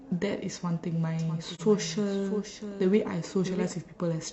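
Speech runs through this clip with two faults. From 1.19 to 3.73 s a doubled audio track appears: a full-band copy trails roughly 0.7 s behind, about 10 dB quieter, likely from a second, slower capture path. Unlike an echo, it has no decay and begins and ends abruptly. At 1.55 to 1.61 s, AAC frame loss with muting leaves a brief 43 ms dip, which fits a single lost frame that the decoder zeroed. Its faded edges set it apart from a hard dropout.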